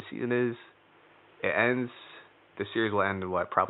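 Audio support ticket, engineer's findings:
No faults found.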